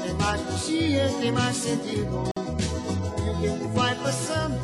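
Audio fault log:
2.31 s, gap at a join of encoded pieces: the sound drops into a silence of about 50 ms with smeared edges, then resumes where it left off. Separately encoded pieces were joined untrimmed, so encoder start delay and last-frame padding remain.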